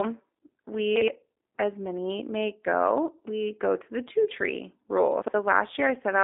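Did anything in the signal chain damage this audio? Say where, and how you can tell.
Yes. At the codec stage, the whole clip has been squeezed through a low-rate speech coder that fits G.729 at 8 kbit/s. The band is confined to roughly 250 Hz to 3.7 kHz, and the speech is rebuilt from a filter and pulse model, so it sounds plainly rough, buzzy and synthetic.

In the buffer or storage stage, chunks out of order show up twice: at 0.96 to 1.08 s, just before "as many may go", and at 5.22 to 5.34 s, just after "the two tree rule". Each time a 60 ms chunk was written one chunk late, so two pieces play swapped. This gives a brief jumbled stutter.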